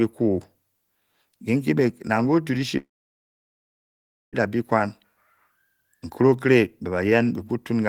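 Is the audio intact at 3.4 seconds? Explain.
No. A long network dropout runs from 2.77 to 4.36 s. The likely cause is a stalled stream: about 1.56 s of audio never arrives, so the receiver stretches the last sound into a brief fading buzz, then leaves near-silence before the speech resumes with that stretch missing.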